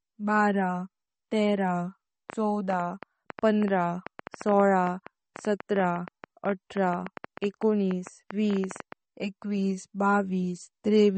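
Throughout, the speech sounds watery and swirly with nothing above 8.4 kHz, plainly audible damage that is likely MP3 compression, consistent with about 32 kbps. From 2.30 to 8.93 s an irregular train of clicks ticks over everything, around fifty at 7.7 per second and peaking roughly 10 dB above the speech, likely interference injecting repeated pulses.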